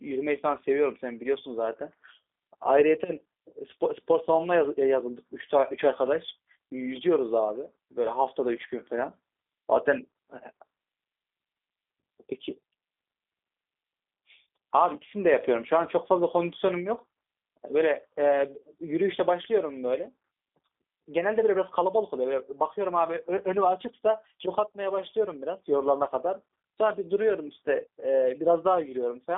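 From start to finish the speech has gone through a G.729 codec, most likely the G.729A variant at a rate that fits 8 kbit/s. It rebuilds each frame from a filter model and a few pulses, so the voice sounds plainly rough and synthetic, confined to about 250 Hz to 3.6 kHz, with nothing above 3.7 kHz.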